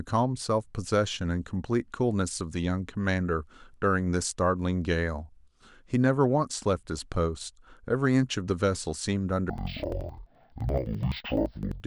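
From 9.50 s to the end, the speech is interleaved audio read as planar: each 85 ms block's alternating samples are split into halves played together at half speed. The sound drops an octave, doubled and choppy at 11.7 Hz, which fits 4096-sample blocks.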